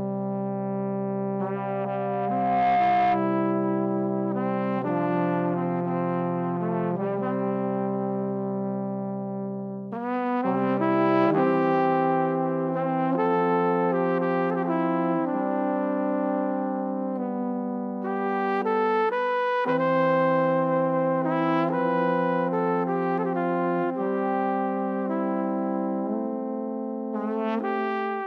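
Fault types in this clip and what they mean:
Loudspeaker feedback squeal: from 1.55 s to 3.31 s a steady tone at 712 Hz swells up out of the sound over roughly a second and ends up a few decibels louder than everything else. A microphone is hearing the loudspeaker it drives, and at 712 Hz the round trip returns more than it sends, so that one frequency keeps feeding itself and growing until the loop is broken.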